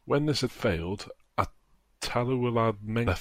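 A brief glitch breaks into the speech from 0.45 to 0.49 s, and a second, shorter blip follows at 3.06 s. Both come from damaged data in a compressed stream. At those points the encoded bytes were corrupted, so the decoder misread the affected frames and lost synchronisation. It then produced garbled output until it found the next valid frame header and could resume normal decoding.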